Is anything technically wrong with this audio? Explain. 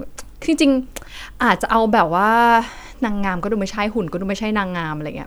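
No, no technical faults.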